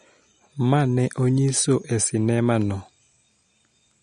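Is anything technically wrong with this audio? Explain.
Yes. Throughout, the speech has plainly audible MP3 compression: nothing above 11.1 kHz and watery, swirling detail, likely from a starved encoder at roughly 48 kbps dropping weak frequency lines.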